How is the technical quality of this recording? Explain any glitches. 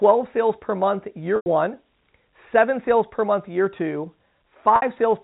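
The recording has two brief dropouts from packet loss with pitch repetition, heard over a G.711 telephone coding channel that carries nothing above 4 kHz.

At 1.36 s, right after "sales per month", about 100 ms is lost, which fits five 20 ms packets. At 4.76 s a 60 ms gap points to three. Each time the receiver loops the last pitch period and fades it over roughly 50 ms, so you hear a brief buzzy hold that decays before the speech cross-fades back.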